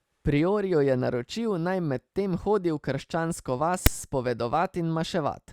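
Speech, with file tags played as audio at 3.86 s: text metadata read as samples gives a brief, hard-edged rasp, offset to one side before zero padding drops to silence. On the waveform this appears as a lopsided rectangular block, and on the spectrogram as a broadband vertical stripe.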